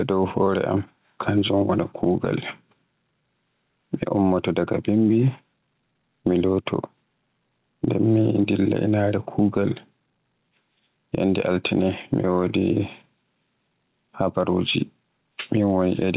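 Gain pumping runs through the whole clip, with the level swinging by around 10 dB. It sounds squashed, with loud and quiet parts pulled close together. The likely cause is mic gain set way too high, so a fast limiter or compressor keeps slamming it down. The call path's narrow band, with nothing above 4 kHz, fits G.711 and doesn't help.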